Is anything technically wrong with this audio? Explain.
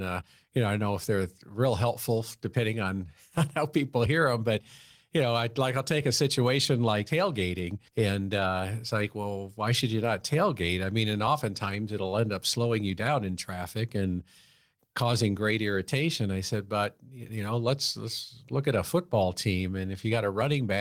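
No, nothing technically wrong can be heard here.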